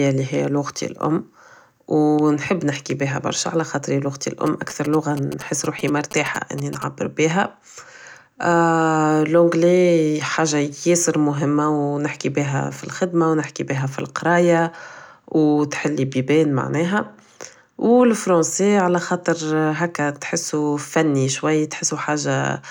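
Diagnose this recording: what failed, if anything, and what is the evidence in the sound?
GSM signalling bursts got into the analogue wiring. From 4.47 to 6.84 s, galloping dit-dit-dit ticks and short buzzes sit about 15 dB under the speech. The buzz repeats at 217 Hz. A nearby 2G phone was signalling, and the circuit rectified its bursts.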